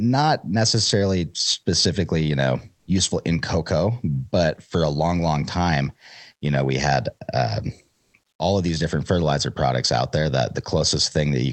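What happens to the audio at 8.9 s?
Nothing goes wrong at 8.9 s: the speech there runs on intact, carrying only the ordinary coding character of the Opus call path it travelled through.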